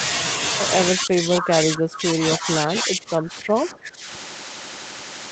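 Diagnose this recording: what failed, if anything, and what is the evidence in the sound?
Speech suppressed in double talk, from 0.91 to 2.18 s and again from 2.37 to 4.08 s, at the call-processing stage. The level sinks in patches, by as much as about 20 dB in the first stretch and about 15 dB in the second, covering roughly a second and then a second and a half. The likely cause is an echo canceller unable to tell this talker from loudspeaker echo while both ends spoke, so it attenuated everything. The band-limit at 8 kHz belongs to the same call path.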